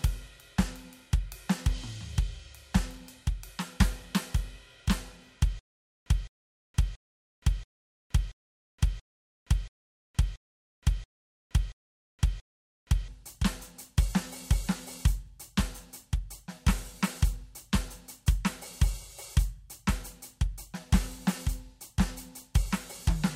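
Stutter with silent gaps runs from 5.59 to 13.08 s in this music clip. A 212 ms fragment repeats 11 times at an even 681 ms period, and each burst is followed by 468 ms of dead digital silence. The likely cause is a player or stream stalling and, on every retry, replaying its last buffered fragment before running dry. The music that should have filled those seven and a half seconds is lost.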